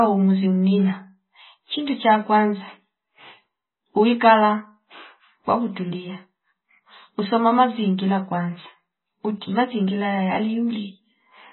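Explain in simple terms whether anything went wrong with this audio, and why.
Yes, the speech is damaged from start to finish, likely by heavy MP3 compression. Nothing above 4 kHz survives, and the sound turns watery and swirly as quiet details flicker in and out. A simple treble cut would sound dull but steady, without that warbling.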